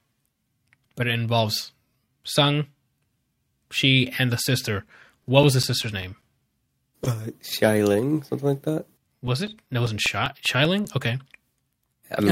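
Speech, marred by two bursts of CD scratch ticks: nine ticks from 5.04 to 6.61 s and thirteen from 8.69 to 11.04 s, each repeating at roughly five to six per second. Each click is a brief dropout lasting a few milliseconds. A scratch on the disc corrupts more data than error correction can rebuild, once per revolution, so the player interpolates or mutes those samples at the disc's rotation rate.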